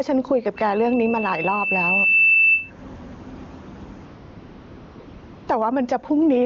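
Gain pumping runs through the whole speech clip. The level swings by roughly 15 dB. Loud and soft passages sit close together, and the sound feels squashed. The likely cause is a microphone gain set far too high, with a fast limiter or compressor clamping it on each peak.

From 0.57 s to 2.71 s there is a loudspeaker feedback squeal. A single tone at 2.7 kHz grows steadily over about two seconds. It ends up around 10 dB above the speech. The microphone is hearing the loudspeaker it feeds. At that one frequency the loop gain passes one, so the tone feeds itself until the loop is broken.

From 4.05 s to 5.47 s the real background gives way to AMR comfort noise. It lasts 1.42 s. The phone judged the talker silent and stopped sending speech frames. The receiver filled the pause with synthetic noise built from a rough sketch of level and spectrum. It sounds smooth and steady, and it switches in and out.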